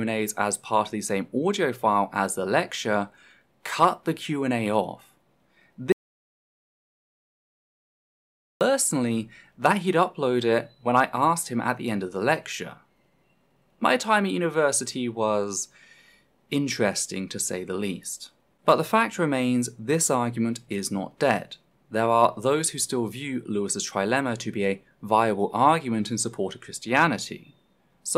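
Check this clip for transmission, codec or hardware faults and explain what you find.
There is one fault: an audio dropout to silence from 5.92 s to 8.61 s. The sound stops abruptly and about 2.7 s of silence follows, with no room tone at all. This likely happened because the input was lost while recording continued and silence was written. Unlike a fade or a quiet passage, the gap is completely empty, and the sound resumes mid-flow.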